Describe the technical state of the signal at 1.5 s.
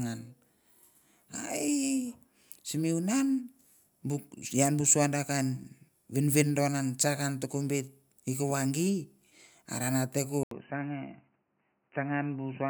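At 1.5 s the speech signal is intact, with no audible technical fault at that moment.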